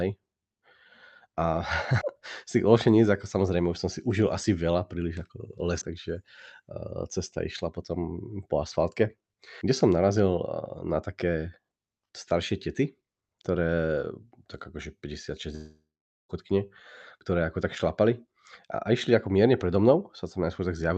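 Audio missing between chunks occurs at 2.01, 5.81, 9.61, 13.41 and 17.21 s. At each point a short piece, roughly a fifth of a second, drops out, and the sound on either side is butted together with no silence, so it skips forward abruptly. The regular spacing, about every 3.8 s, suggests a recorder or processor handling the audio in blocks of roughly 4 s and likely losing a sliver each time it closes one block and opens the next.

A long network dropout runs from 15.55 to 16.31 s. The receiver stopped getting audio and filled the gap for about 0.74 s. The last sound is stretched into a fading buzz-like hiss, which then gives way to roughly 0.45 s of near silence before the audio resumes further on with the missing stretch gone. This is likely the result of packets never arriving, with loss concealment covering the hole. Throughout, the audio shows the band limit of a call codec, with nothing above about 8 kHz, as expected for Opus on a call path.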